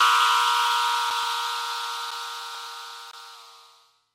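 The clip is everyday sound with two kinds of fault. There are three gaps between stream segments, at 1.10 s, at 2.11 s and from 3.11 to 3.14 s. They fall about once a second, which fits 1-second segments whose time stamps don't quite meet. The player fills each hole with silence, about 5 ms, 7.5 ms and 20 ms long, so the sound drops out with hard edges, but nothing is missing.

The repeated buffer faults, at 1.23 s and 2.55 s, sound different. Audio arrived late, so the device played its last piece again, once each time. The repeat is so short that it fits a buffer of about 5 ms, and it comes across as a small click rather than a stutter. What tells them apart is that a repeat duplicates sound with no silence in it, while a gap is empty silence with no repeated sound.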